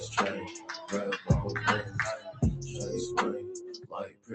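From the start, a noise suppressor built for speech is working on music or other sound. It treats steady tones, ambience and reverb as noise and turns them down. The level swings by about 10 dB, so held sounds pump and thin out.

Between 0.47 s and 0.91 s, sound is cut by the noise suppressor. Sustained parts dip by up to about 10 dB, for roughly a third of a second in all. Sharper onsets get through. Decays sink early.

From 3.6 s to the end, the noise suppressor cuts the sound again, and harder. The deepest drop is about 16 dB. Steady or fading parts sink the most. Throughout, the call codec limits the band near 8 kHz.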